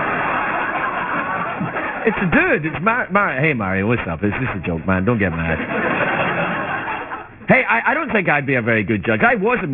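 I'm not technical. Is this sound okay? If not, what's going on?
No, there's aliasing the whole way through. The audio seems to have been squeezed to a much lower sample rate without first removing the highs. Anything above about 3 kHz folds back down as wrong, unrelated tones, so bright sounds turn gritty and metallic.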